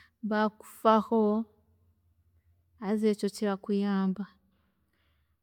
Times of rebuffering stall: none

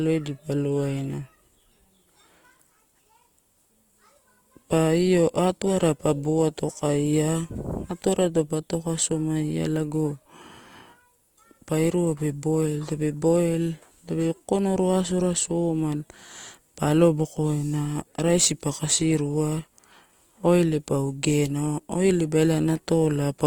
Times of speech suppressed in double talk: none

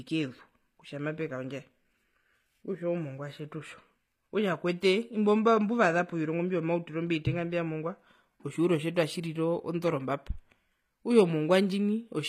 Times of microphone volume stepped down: none

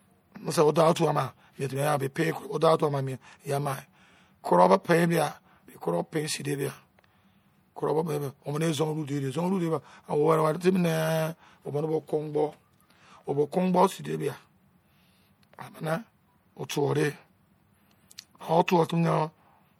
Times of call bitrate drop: none

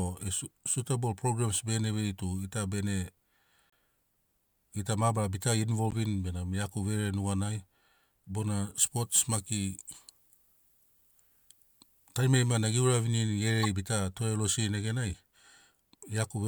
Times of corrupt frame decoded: 3.70-3.73, 5.87-5.94, 13.63-13.68

